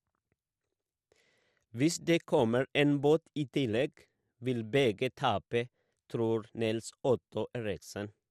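The speech sounds dull and muffled throughout, with a gurgling, granular roughness riding on it and upper frequencies that seem to drop in and out from moment to moment. That pattern is likely MP2 compression at a low rate, around 80 kbps. The encoder divides the signal into 32 equal sub-bands and runs short of bits, so it shuts off the top bands intermittently and quantises the surviving ones coarsely, producing the flicker and grit.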